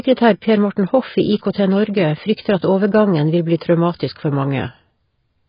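From start to finish the speech sounds dull and smeared, with nothing above 5.2 kHz and a warbly, fizzy edge on sibilants and held sounds. That's likely heavy AAC compression (AAC-LC), with the damage pointing to a bitrate around 16 kbps.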